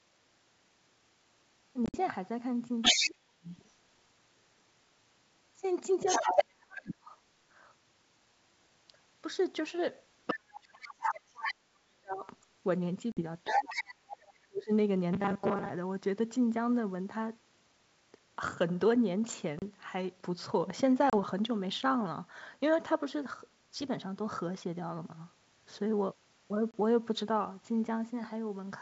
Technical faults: packet loss on an ADPCM call; other side's voice leaking through; speech suppressed in double talk; robotic sound from repeated short buffers

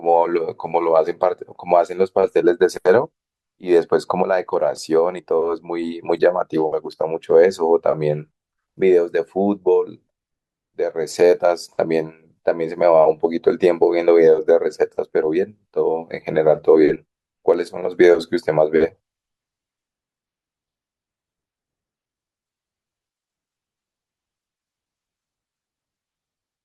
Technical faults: compressed frames skipped

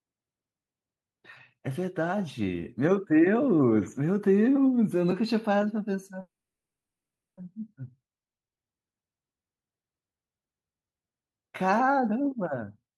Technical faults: call audio freeze; long network dropout; jitter buffer speed-up

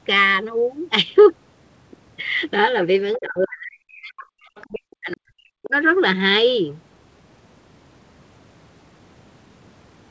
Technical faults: other side's voice leaking through; speech suppressed in double talk

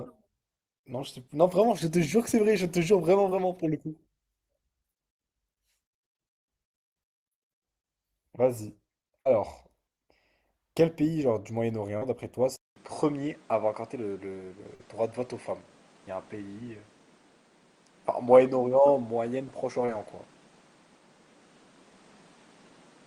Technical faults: short concealed packet loss; burst of packet loss; input switched to a poorer device

